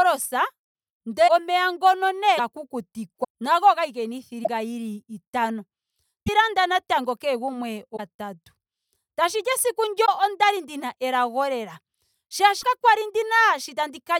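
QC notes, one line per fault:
1.27–1.30 s, 2.37–2.40 s, 3.23–3.25 s, 4.43–4.48 s, 6.26–6.29 s, 7.96–8.00 s, 10.05–10.09 s, 12.61–12.65 s: broken MP3 bit reservoir. Each is a 20–46 ms burst of noise or a brief skip: just before "omeya ngono" at 1.27 s, right after it at 2.37 s, and before "landa natango kehe gumwe" at 6.26 s. This is likely missing frames of about 26.1 ms, with the next frame decoding borrowed bits from the wrong data.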